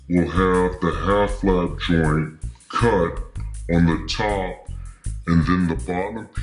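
From start to end, the clip suffers from a wrong sample rate. It plays at two thirds of its proper speed, and pitch drops by about 7 semitones with it. Everything sounds low, slow and heavy. This fits 48 kHz audio played back at 32 kHz without conversion.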